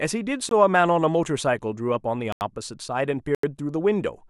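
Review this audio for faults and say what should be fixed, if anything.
Three blocks of digital silence cut into the speech: a 20 ms gap at 0.49–0.51 s, and 85 ms gaps at 2.32–2.41 s and 3.35–3.43 s. The signal drops straight to zero and back with no fade, leaving a brief hole. The 85 ms gaps fit a lost 4096-sample buffer, where the output was not filled in time. To prevent this, enlarge the buffer or raise the audio thread's priority so each block is delivered before its deadline.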